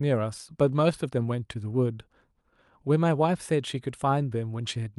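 No technical faults can be heard anywhere in the recording.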